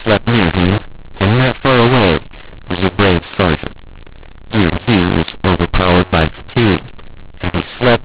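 From start to finish the speech carries a mu-law and A-law mix-up: audio coded as G.711 mu-law is being decoded as A-law, so each 8-bit code maps to the wrong level. Loud passages are harshly distorted, and the quietest samples are pushed well above silence, so pauses fill with hiss. On a waveform the envelope looks jagged and the gaps never settle to zero. On a spectrogram broadband noise smears up to the 4 kHz ceiling, which fits 8 kHz telephone sampling.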